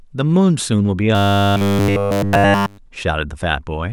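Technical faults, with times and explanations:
1.15–2.78 s, robotic sound from repeated short buffers: the speech becomes a rigid metallic buzz at 100 Hz, likely from a 10 ms chunk replayed over and over while new audio is skipped. The waveform shows identical 10 ms cycles; the spectrogram shows even 100 Hz harmonic stripes.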